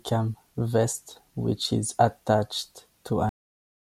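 At 3.29 s, right after "is attached", the speech stops mid-sound into dead digital silence: a cut-off end, where the final buffers were never written or played.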